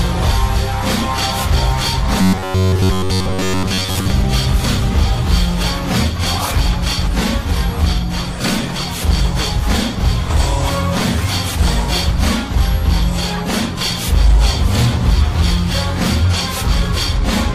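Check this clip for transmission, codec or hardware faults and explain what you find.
One fault appears. From 2.21 to 4.10 s there is robotic sound from repeated short buffers. New audio likely arrived too seldom, so a fragment of about 10.7 ms kept replaying. Most of that stretch is repeats. This produces a rigid, metallic 93.8 Hz buzz.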